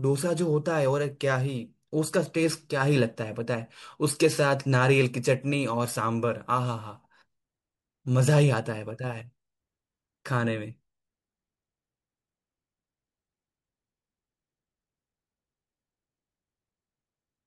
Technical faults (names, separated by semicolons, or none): none